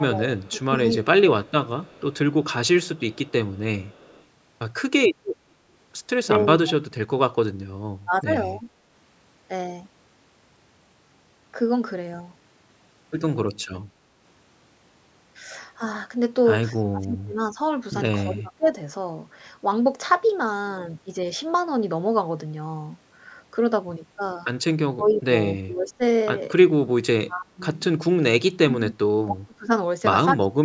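A speech recording from a call, band-limited with nothing above 8 kHz, in which the talker repeatedly dips or breaks up: speech suppressed in double talk at 0–1.52, 6.35–7.11, 8.05–8.65, 16.73–18.77, 24.75–26.02 and 27.18 s to the end, with drops from about 15 dB to about 35 dB. These are likely from an echo canceller turning the talker down while the far side also spoke. Unlike a network dropout, the voice is pulled down in level, thinned or cut out in pieces by the canceller rather than broken by glitches. An echo leak also appears from 1.45 to 4.24 s and briefly at 25.11–25.16 s. It is a faint copy of the sound trailing 245 ms behind, about 30 dB and then about 20 dB below the speech, likely residue the loudspeaker side's canceller failed to remove. Its fixed delay and quietness set it apart from room reverberation, which would smear continuously instead.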